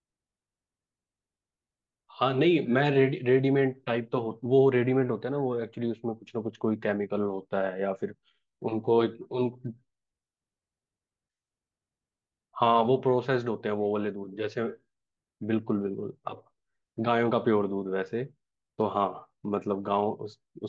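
No audible technical faults.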